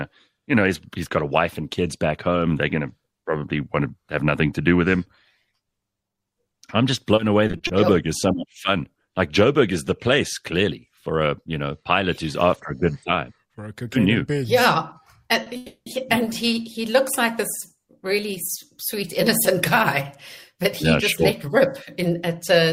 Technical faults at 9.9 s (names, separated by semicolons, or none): none